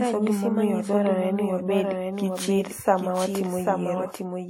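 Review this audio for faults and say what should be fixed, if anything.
A doubled audio track runs through the whole speech clip: a second full-band copy trails about 0.7 s behind, about 5 dB quieter, with no decay or room colour. Likely a second capture path or misaligned edit. The waveform shows every syllable envelope repeated at that offset. To prevent it, monitor through a single path and check edits for duplicated regions.

WMA compression damage is plainly audible throughout, with ringing, washy smearing and hiss that breathes with the speech, pointing to a low bitrate around 48 kbps. The likely cause is long-block quantisation in a simple encoder. A spectrogram shows blurred onsets and gaps where weak components were zeroed. To prevent it, keep the audio uncompressed or use a higher bitrate.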